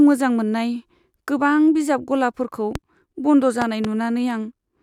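A sharp loud pop cuts through the speech at 2.75 to 2.78 s, just after "बिजाब गलाफोरखौ", and a pair of pops follows between 3.62 and 3.87 s, each peaking at roughly 10 dB above the speech, which carries on underneath. The likely cause is a sudden voltage step or pulse, from a plug, switch, static discharge or driver glitch, entering the signal chain and being shaped by the circuits after it into a thump.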